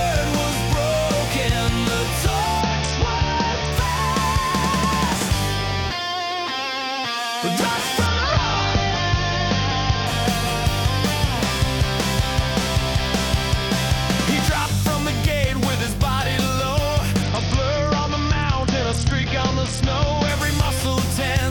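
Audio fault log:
2.61–3.72 s, 8.06–10.07 s, 17.23–20.29 s: Bluetooth SBC bit pool drop. The link congests and the encoder cuts its bit allocation, which fits a bit pool falling from 28 to 8, near 72 kbps. The upper sub-bands get starved and the rest quantise coarsely, so the treble dulls and gritty noise rises until recovery.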